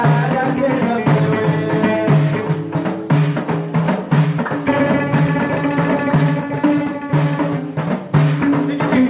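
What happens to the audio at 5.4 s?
Nothing goes wrong at 5.4 s; the audio there plays through intact, with no dropout, click, glitch or other fault.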